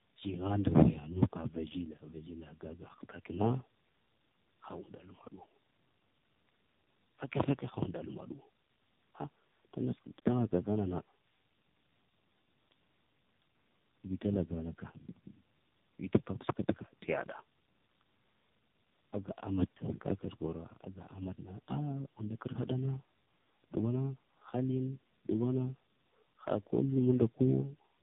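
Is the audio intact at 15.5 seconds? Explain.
No. At 15.5 s, as throughout the clip, you're hearing tandem speech coding: the speech sounds like it was decoded and re-encoded through three speech codecs in a row, probably a low-rate AMR-NB stage among them, each working on the last one's damage. It's rough, muffled and warbly, with nothing above 3.8 kHz.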